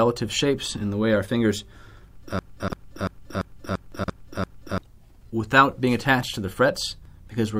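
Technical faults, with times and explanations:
2.39 to 4.78 s: system hang loop. The computer or audio driver stalled, but the sound hardware kept playing its ring buffer. The same 341 ms piece of sound repeats seven times, at about 2.93 Hz. That slow rate gives a machine-gun stutter rather than a buzz. The loop length fits a buffer of 16384 samples. New audio stopped arriving during the freeze, so about two seconds of sound are missing.
2.60 to 2.72 s and 3.92 to 4.08 s: chunks out of order. Both events fall inside the stutter. In each, a 40 ms chunk was written late and plays after chunks that should follow it. At 2.60 s it lands two chunks late, and at 3.92 s three chunks late. No audio is lost, but the sequence is scrambled. Each event has three hard joins, which are heard as a brief jumbled patch.
7.05 s: overlap between stream segments. The time stamps of two segments, each 2 s long, overlap at this point. 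The player treats the overlap as doubled sound and trims it, although the sound was not really repeated. A few milliseconds of real audio disappear and the waveform jumps across the gap. This is heard as a single click or a tiny skip near the end of the clip.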